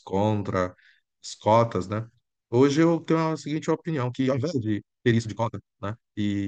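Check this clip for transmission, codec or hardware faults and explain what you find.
One fault stands out: a time-stretched section from 3.87 s to the end at 6.48 s. The speech abruptly turns rushed, running 1.89 times faster than before, yet its pitch stays where it was. The likely cause is software squeezing that passage to fit a shorter length, discarding short slices of audio so the pitch would not rise with the speed.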